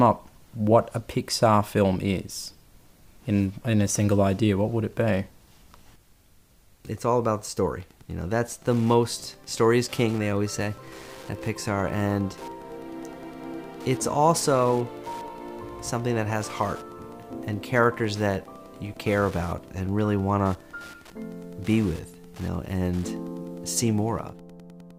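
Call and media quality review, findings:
Wi-Fi interference from 7.78 s to end. Steady ticking, about ten per second, at the 102.4 ms beacon period, roughly 25 dB under the signal. A nearby radio's beacons are rectified in the audio circuit.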